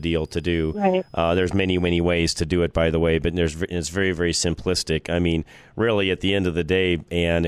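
A switching power supply in the recording chain is running in an audible burst mode or beating against another supply, producing a switching supply whistle from 0.0 to 2.0 s. It sits around 5 kHz, roughly 40 dB below the speech, so it stays faint but high. Its pitch wanders between about 4.78 and 5.19 kHz as the supply's load shifts, giving a slightly unsteady high whine under the speech.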